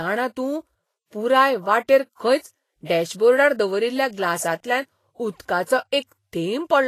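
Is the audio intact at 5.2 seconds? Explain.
No. At 5.2 seconds the speech carries the same damage heard through the whole clip, likely from Vorbis compression at a low setting consistent with about 31 kbps. Nothing remains above 14.2 kHz, and the treble below that is quantised so coarsely that its fine detail turns into hiss of similar energy, leaving a grainy edge and softened consonant attacks. A plain low-pass filter would only dull the top end; this grain is what marks it as codec damage.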